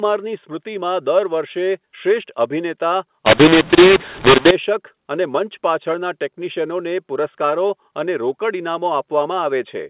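From 3.26 to 4.51 s, A-law samples are decoded as mu-law, a mu-law and A-law mix-up: levels scramble, speech turns harsh, pauses fill with noise.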